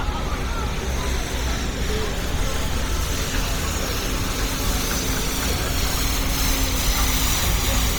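Likely Bluetooth LC3 compression throughout, consistent with 32 kbps, 10 ms frames; heavily coarse, noise-filled highs give a grainy, breathy edge, nothing above 20.2 kHz.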